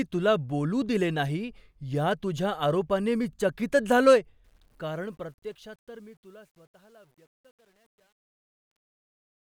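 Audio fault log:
4.44–9.41 s, truncation distortion on a fade: as the fade-out that begins around 4.4 s sinks, the speech turns gritty, and from 5.54 s it is at its worst. Without dither, the quietest samples collapse into coarse square steps, which fits a fade keeping only 10 bits.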